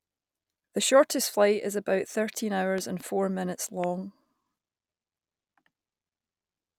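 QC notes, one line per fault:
2.78 to 3.03 s, loud pop: two sharp pops in quick succession, peaking around 10 dB above the speech, which keeps going underneath. Likely a plug, switch or static discharge dumping a voltage jump into the line, and the circuitry after it shapes it into that hard click.
3.84 s, loud pop: a single, smaller pop, about 5 dB over the speech and very brief, sitting on top of the sound.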